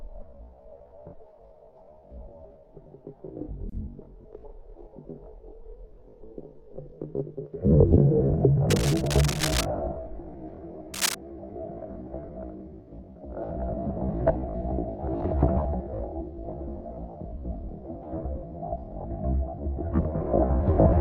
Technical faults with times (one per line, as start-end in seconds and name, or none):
8.69-9.65 cable scratch noise
10.94-11.15 cable scratch noise